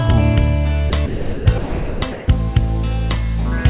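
At 0.90 to 0.92 s, 1.06 to 1.46 s, 1.58 to 2.02 s and 2.12 to 2.28 s, the sound gives way to a flat, steady hiss before returning. These are most likely sound dropped by the voice detector. The sender judged these stretches as background and stopped transmitting, and the receiver filled each gap with comfort noise. The longer gaps run around 0.4 s. Throughout, nothing reaches above 4 kHz, consistent with a G.711 narrowband call path.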